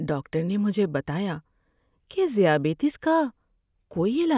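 A short speech recording with nothing technically wrong to hear in it at any point.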